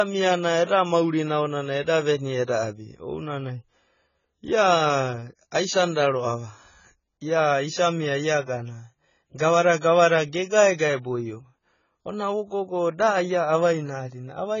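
Dull, smeared speech runs through the whole clip, with a watery, warbling texture on sustained sounds and sibilants, and nothing audible above 7 kHz. The likely cause is heavy AAC compression. The damage points to AAC-LC at a very low bitrate, around 16 kbps. At that rate the encoder pulls its cut-off down and quantises the remaining spectrum so coarsely that bands thin out or smear from frame to frame. Twice a short burst of hiss arrives just ahead of a sharp onset, which then sounds softened: from 0.64 to 0.69 s, spanning 45 ms, and from 1.82 to 1.87 s, spanning 46 ms. This is pre-echo. The transform spreads its quantisation noise across the whole block, so when a sudden attack lands late in that block, the noise sized for the loud attack also fills the quiet stretch before it.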